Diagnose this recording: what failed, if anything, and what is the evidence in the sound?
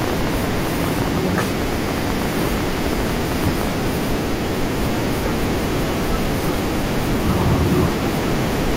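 Something outside the audio path was likely coupling into the analogue wiring or the interface, injecting a train of clicks. From 0.02 s to 3.78 s the speech carries sharp, similar-shaped pulses at about 12.3 per second, unevenly spaced, roughly fifty in all, peaking around 10 dB above the speech itself. Because they are added on top of the signal rather than cut into it, the ticking stays audible through pauses as well as under the speech.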